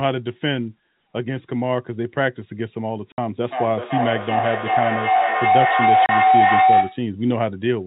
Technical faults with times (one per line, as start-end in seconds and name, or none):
3.12-3.18 packet loss filled with silence
3.44-7.08 feedback howl
6.06-6.09 packet loss filled with silence